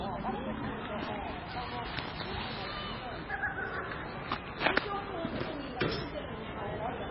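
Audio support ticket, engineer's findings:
MP3 compression, throughout: hard cutoff at 5.6 kHz, heavy watery swirl, smeared attacks. Likely a starved MP3 encoder, near 16 kbps, zeroing weak frequency lines.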